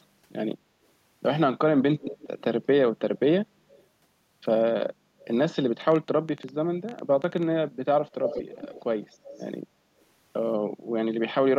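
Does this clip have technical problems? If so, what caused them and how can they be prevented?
Yes. There's an echo leak: a delayed copy of the speech, about 185 ms behind, shows up at 1.99–2.43, 2.62–2.66, 3.70–3.84, 5.20–5.25, 8.09–8.82 and 9.25–9.47 s. It ranges from barely there to fairly prominent, and is loudest at 8.09–8.82 s. The likely cause is a far-end loudspeaker whose echo canceller didn't fully remove what its mic picked up, so it went back down the line. A headset on that end would stop it.

There's also a train of clicks from 5.82 to 7.44 s. It's around fifteen similar ticks at roughly 9 per second, irregularly spaced, with peaks about as loud as the speech. That pattern most likely comes from electrical interference near the gear or a faulty connection or power supply. Moving other equipment away, reseating cables or swapping the interface should clear it.

Finally, the background gets gated by the echo canceller at 10.74–10.88 s. 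The room sound dips by up to about 16 dB for roughly 150 ms while the canceller clamps the mic during loudspeaker playback, then comes back. Gentler suppression settings or a headset would avoid that.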